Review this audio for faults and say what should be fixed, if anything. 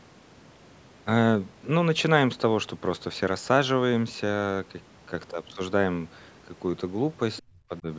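From 7.37 to 7.42 s a faint second voice sits under the speech, roughly 25 dB quieter. This is likely the other side's voice leaking through: loudspeaker sound the echo canceller left in the microphone. A spectrogram shows a weak, separate harmonic pattern, while the waveform barely changes. A headset, lower loudspeaker volume or stronger residual-echo suppression would prevent it.

From 7.41 to 7.87 s the speech drops in pieces by as much as around 35 dB, about a third of a second in total. The canceller, facing both sides at once, likely turned everything down, which is speech suppressed in double talk. The waveform's envelope shows abrupt hollows, and the spectrogram shows dark vertical gaps across the band, which tops out at 8 kHz. Better double-talk detection in the echo canceller would keep the near talker at full level.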